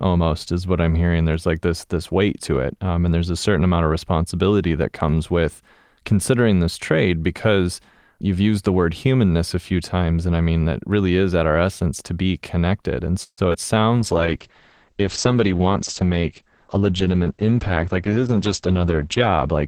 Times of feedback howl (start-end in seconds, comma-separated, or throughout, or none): none